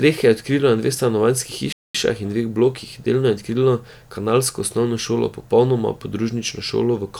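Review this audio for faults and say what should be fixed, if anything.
The speech was likely reduced to about 10 bits by plain rounding with no dither, so the quantisation error tracks the signal instead of sitting as a steady hiss. This is low bit depth without dither. Throughout the clip, quieter passages take on a grainy, gritty texture that shifts with the speech, and decaying tails break up rather than fading smoothly, with the error sitting only around 45 dB below the signal. Keep at least 16 bits, and apply dither whenever word length is reduced.

A playback stall, likely from the player starving for data or its thread being blocked, cuts the output to silence from 1.73 s to 1.95 s, a gap of about 0.22 s. The speech stops abruptly mid-flow and then resumes after the hole, which breaks the natural rhythm. Give the playback path enough buffering and keep its audio thread free of blocking work.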